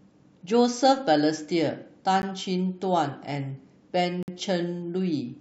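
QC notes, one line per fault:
2.22 s and 4.23–4.28 s, gap between stream segments: two hard-edged holes of silence, about 12 ms and then 52 ms, about 2 s apart. This fits mismatched timestamps at the joins of 2 s segments, with the player padding each hole with silence. No speech is lost.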